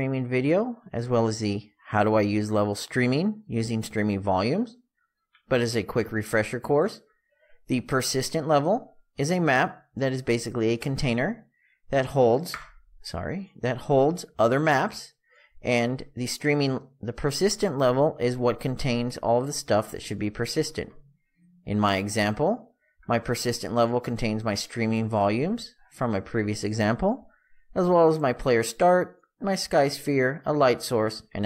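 No technical faults can be heard anywhere in this audio.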